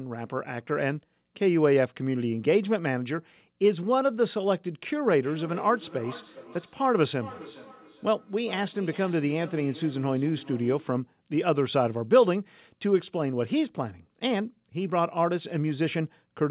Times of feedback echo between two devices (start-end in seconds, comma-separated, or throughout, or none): 5.11-11.04